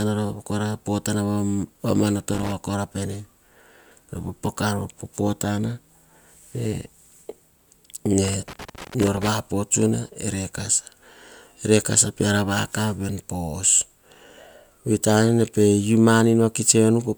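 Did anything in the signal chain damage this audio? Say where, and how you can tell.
Yes: loose connector crackle in the analogue wiring, from 2.33 to 2.52 s and from 8.24 to 9.29 s. A poor contact intermittently breaks the speech path, giving irregular scratching. The waveform shows chopped gaps and sharp spikes, and the spectrogram shows scattered broadband vertical streaks.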